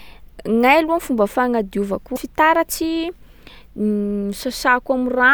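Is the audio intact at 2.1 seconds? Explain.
No. Damaged data in a compressed stream hits from about 2.13 to 2.18 s, a break of roughly 50 ms in the speech. A stretch of the encoded bytes there is corrupt, so the decoder misreads or rejects those frames, loses its place in the bitstream and has to hunt for the next valid frame header before it can resume. That brief loss of sync comes through as a short chirp, squawk, click or hole.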